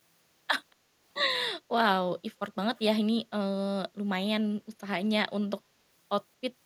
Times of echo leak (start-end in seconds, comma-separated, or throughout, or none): 0.71-0.75, 2.76-2.81